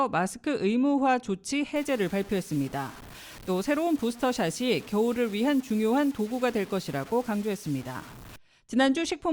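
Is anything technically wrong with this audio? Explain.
Yes. From 1.76 s to 8.36 s the speech was likely requantised to very few bits, consistent with about 6 bits, by truncation without dither. The error tracks the voice as grainy, gritty distortion roughly 20 dB below it, and the quietest passages sputter or drop out.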